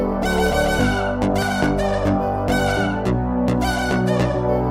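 No technical faults can be heard anywhere in the audio. Nothing interrupts, distorts or degrades the sound at any point.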